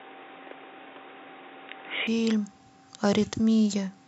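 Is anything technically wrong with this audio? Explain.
Yes. From the start to about 2.07 s the speech is band-limited, with nothing above 3.8 kHz, so it sounds dull and boxy, about 5 dB different in level, with its own faint background noise roughly 30 dB below the speech. Then it opens up abruptly with no gap, likely an input switched to a poorer device for that first stretch.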